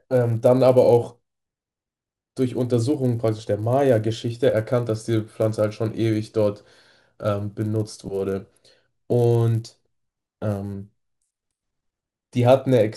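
Throughout the speech, the sample-rate converter was reset at the start of every 10 ms block, a conversion that sounds like a doubling, likely from 24 kHz to 48 kHz. Each block was processed without its true neighbouring samples, so the resampler restarted on every block and left a small error at each edge. Those errors repeat at 100 Hz, which at this block length merges into a steady buzz riding under the voice, heard only while there is signal.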